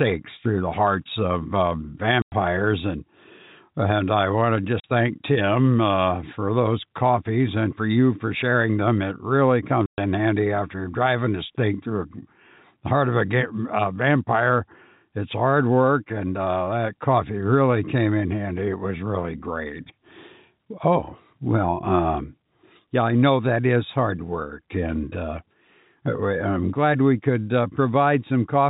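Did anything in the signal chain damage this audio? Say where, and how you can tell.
Yes, at the network stage: packets went missing and the receiver filled the gaps with silence. The speech drops out abruptly from 2.22 to 2.32 s, from 4.80 to 4.84 s, and from 9.86 to 9.98 s, holes of 100, 40 and 120 ms. Those lengths are all multiples of 20 ms, which fits 20 ms packets. Each gap starts and stops with a hard edge. The band-limited telephone sound of the G.711 coding is not part of this fault.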